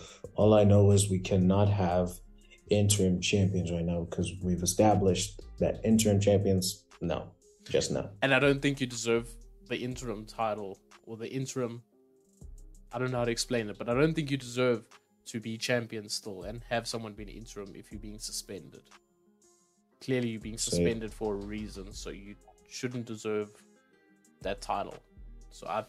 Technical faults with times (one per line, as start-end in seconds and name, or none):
none